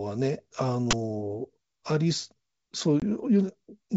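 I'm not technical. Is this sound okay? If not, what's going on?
No. At 0.91 to 0.93 s there is an uninitialised buffer: a block of sound, about 23 ms long (which fits a 1024-sample block), played before any audio was written into it, so leftover memory came out as a sudden loud burst of harsh digital noise. Unlike a dropout, this adds noise instead of removing sound.

At 3.00 to 3.05 s there is packet loss on an ADPCM call. About one packet, 20 ms of speech, never arrived and became a hard-edged silent gap. Because this kind of coding predicts each sample from the previous ones, the speech comes back slightly off in level or distortion before settling. That silent gap followed by recovery separates it from the noise burst earlier.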